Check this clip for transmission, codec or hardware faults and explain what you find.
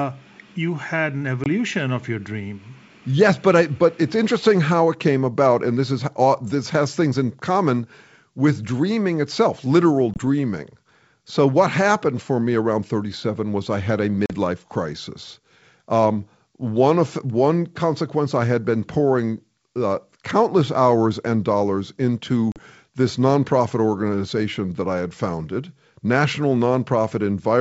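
There is one kind of fault: packet loss on an ADPCM call, heard four times in this speech over a clean-sounding wideband G.722 link.

At 1.44–1.47 s (between "you had an" and "of your dream"), 10.14–10.19 s, 14.26–14.34 s (after "was I had a") and 22.52–22.59 s (between "countless hours and dollars" and "this nonprofit organization that"), hard-edged silent holes appear. The first two lose about 20 ms each and the last two about 40 ms, which fits one and two lost packets. The decoder's predictor and step size drift from the sender's, so speech resumes with a click, wrong level or brief distortion that settles within tens of milliseconds. That disturbed recovery is what separates it from a plain dropout.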